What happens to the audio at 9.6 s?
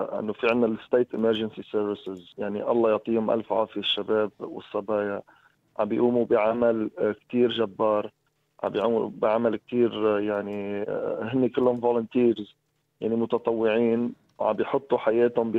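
Nothing goes wrong at 9.6 s: the audio runs straight through that moment with no dropout, click, distortion or other audible fault.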